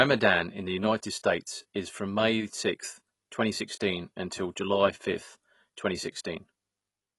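Throughout, the speech sounds dull and smeared, likely from AAC compression at roughly 32 kbps; a spectrogram shows nothing above 11.5 kHz.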